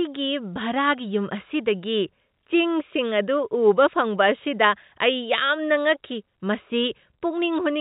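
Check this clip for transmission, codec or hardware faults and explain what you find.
No transmission, codec or hardware faults appear here.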